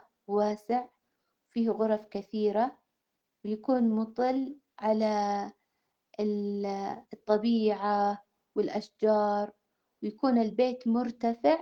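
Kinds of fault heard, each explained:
Clock drift between sender and receiver: The sending side's audio clock runs about 3 percent slow against the receiver's. The receiver's buffer keeps draining, so it must stretch the audio to keep going. Small timing hiccups recur across the whole speech clip.
Repeated timing corrections: From 0.1 s to 11.26 s the receiver keeps inserting short repeated pieces to cover the slow sender. Playback runs at about 97 percent speed. Roughly a third of a second is added overall, heard as slight, unevenly spaced hiccups.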